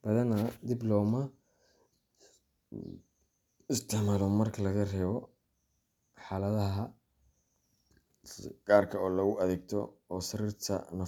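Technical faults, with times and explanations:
No technical faults are audible.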